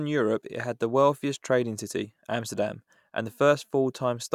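A short speech recording with nothing technically wrong to point to, so there are no times or causes to give.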